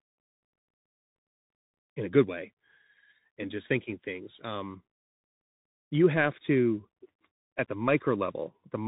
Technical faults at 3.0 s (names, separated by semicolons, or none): Bluetooth CVSD headset codec